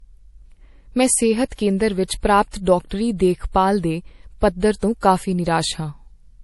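From start to finish, the speech was likely first encoded as low-bitrate MP3, consistent with about 48 kbit/s, then re-saved at a much higher rate, which is low-bitrate audio saved at a high bitrate. Nothing remains above 11.5 kHz, so the top end sounds dull, and re-encoding restored nothing.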